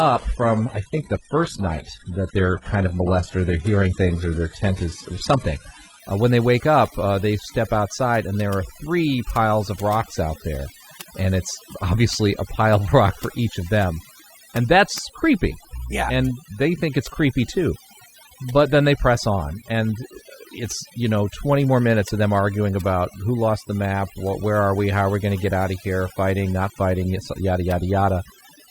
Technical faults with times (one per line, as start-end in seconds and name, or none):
0.00-28.70 overdone noise removal
0.00-6.00 adaptive stream starting at a low bitrate